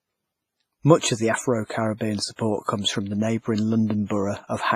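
Throughout, the speech rings and smears, with hiss breathing alongside it and nothing above 15.5 kHz, likely heavy WMA compression at a bitrate consistent with 24 kbps.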